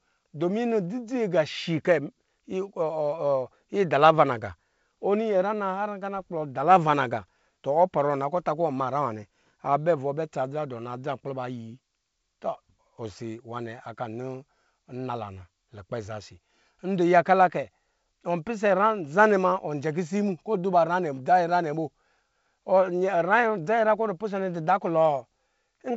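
Nothing in this speech recording stood out as a technical problem on listening, with the wideband telephone coding audible as a band limit around 7.7 kHz.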